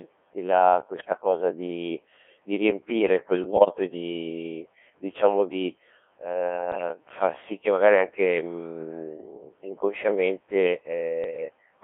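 The whole clip of speech runs through the Codec 2 vocoder, heavily. Only pitch, voicing, level and a spectral envelope survive, rebuilt from sine waves inside a 300 Hz to 3.4 kHz band, so it's robotic and buzzy throughout, which fits a 1.6 kbit/s mode. Then bit errors on digital voice radio hit four times: 0.98 to 1.15 s, between "i la" and "cosa di di riempire"; 3.44 to 3.72 s, after "di di riempire quel" and before "e di diciamo di"; 6.72 to 6.89 s, just before "far sì che magari"; and 11.24 to 11.45 s. With a few percent of bits flipped, the decoder gets bad pitch, level and spectrum for a handful of frames, so the voice lurches and warbles into bleepy gibberish.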